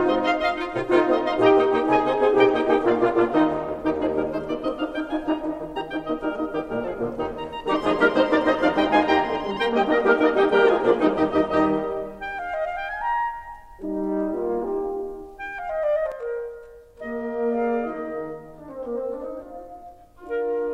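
From 16.1 s to the end, the music turns rough and slightly doubled. This is channel delay (comb filtering). One channel lags by roughly 20 ms before the mono sum. Shared content cancels in evenly spaced notches, the first near 20 Hz.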